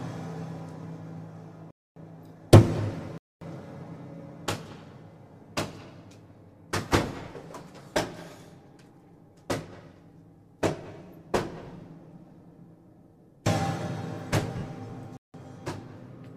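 At 1.71 to 1.96 s and again at 3.18 to 3.41 s, the sound drops into blocks of digital silence lasting about 256 ms and 235 ms. Output samples were zeroed, likely because the output buffer was not filled in time. The sound cuts out and back with no fade.

At 14.58 s, lost LE Audio frames produce a 50 ms stretch where the LC3 decoder repeats the last spectrum with randomised signs, smearing tonal content into noise.

At 15.17 to 15.34 s, a third block of digital silence, about 171 ms long, which fits an 8192-sample block at 48 kHz, cuts in and out with no fade.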